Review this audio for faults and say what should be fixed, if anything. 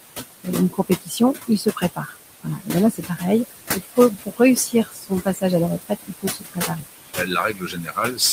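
Noise suppressor artifacts run through the whole clip: the suppressor pulls the steady room noise down by about 18 dB frame by frame, so the noise sinks between the words and rises under them.

Speech cut by the noise suppressor occurs from 0.43 to 3.23 s, 3.73 to 5.43 s, and 5.81 s to the end. The suppressor mistakes quiet speech for noise and drops it by about 18 to 20 dB, so soft sounds and endings are swallowed. The losses add up to roughly a second in the first stretch and under a second in the second.

The room noise sits only about 9 dB below the speech. Reduce that noise at the source or lower the suppressor's depth and raise its speech-detection sensitivity.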